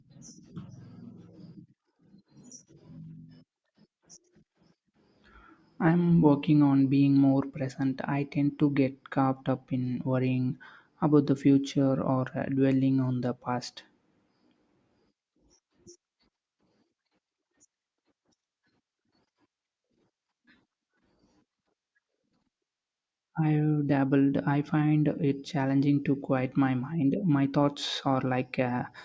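No faults can be heard anywhere in this speech recording.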